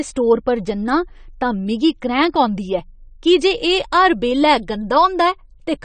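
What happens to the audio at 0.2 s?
At 0.2 s you're hearing the same thing that runs through the whole clip: what's most likely AAC compression. The speech sounds dull and a bit smeared, with nothing above about 9 kHz, and there's a warbly, fizzy edge on sibilants. That fits an AAC-LC encode at a low rate, something like 32 kbps, where the encoder drops the top band and quantises each frame's spectrum so coarsely that gaps or substitute noise become audible.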